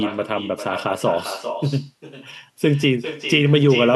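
Throughout the recording, the far end's loudspeaker output is picked up by its microphone and returned uncancelled, an echo with no canceller. Every phrase of speech is shadowed roughly 400 ms later by a thinner copy about 11 dB quieter.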